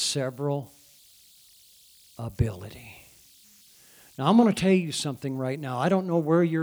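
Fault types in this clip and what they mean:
converter idle tones: an undithered delta-sigma converter settling into repeating bit patterns, heard throughout as a faint whistle around 4 kHz, about 34 dB below the speech.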